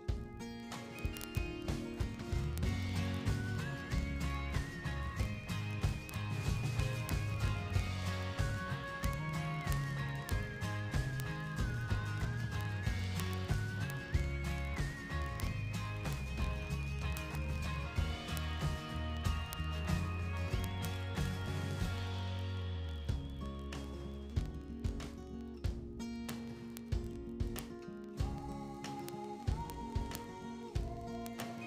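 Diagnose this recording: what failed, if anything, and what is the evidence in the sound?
What failed is the clocking on a digital interface, and you can hear it as word clock ticks running from about 0.10 s right through to 31.65 s. They come at a steady rate, roughly every 20 ms, so around fifty a second and well over a thousand across the clip. The receiving device is free-running instead of locking to the sender, off by something like 1000 ppm. Each time the clocks slip past each other, a single sample gets dropped or doubled, and that's each tick.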